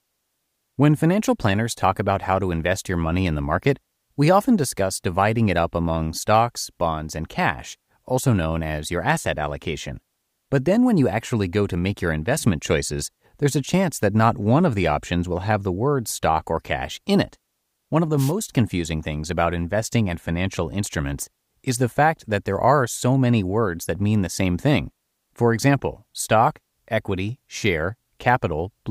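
Speech, with a short burst of static swishing over it from 18.17 to 18.32 s: a wireless microphone noise hit, where reflections briefly cancel the FM radio signal and receiver noise surges through.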